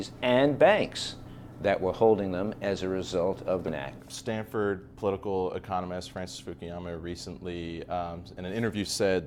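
At 3.67 to 3.70 s the sound jumps abruptly ahead with a brief blip, likely a stream segment skipped when one segment failed to load.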